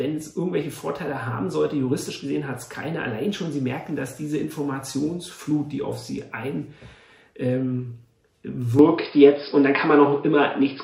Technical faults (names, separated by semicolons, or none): input switched to a poorer device